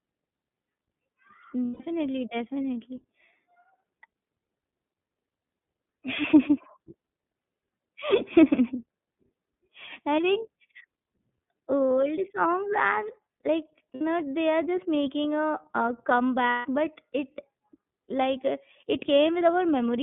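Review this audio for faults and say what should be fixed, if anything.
The whole clip carries iLBC codec damage. The speech sits in a 150 Hz to 3.5 kHz band with a rough, synthetic edge, which fits iLBC's 13.33 kbps, 30 ms frame mode. Unlike generic low-pass filtering, the roughness comes from the coded excitation, not just the missing highs.

Lost iLBC frames occur at 1.65 to 1.81 s (150 ms), 13.94 to 14.01 s (60 ms), and 16.49 to 16.66 s (150 ms, just before "but it"). The decoder repeats the last pitch cycle with added noise, giving a held, buzzy vowel. Because each frame decodes independently, the voice recovers immediately, with no smeared tail.

To prevent this, use a wideband codec such as Opus with in-band FEC and a jitter buffer sized to absorb these packet losses.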